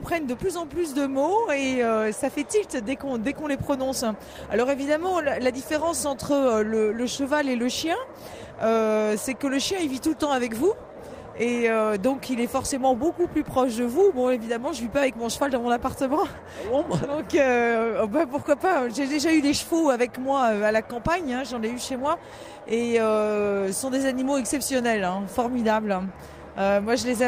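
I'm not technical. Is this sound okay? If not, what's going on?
No. There is clock drift between sender and receiver: the sending device's clock runs about 2% slower than the receiving one's. The receiver's waiting area for incoming audio keeps running low, so it has to stretch the sound to avoid running out.

Those stretches are repeated timing corrections, from 0.76 s to 27.22 s. The receiver keeps repeating tiny slivers of sound, playing it at about 98% speed and adding nearly half a second overall. You may notice slight hiccups or an unsteady pace.

There are also scattered short gaps between 6.6 s and 8.84 s: about four bits of audio arrived late or not at all, each roughly 10 ms or less. The receiver covered each by carrying the previous sound on, leaving brief ticks or smears.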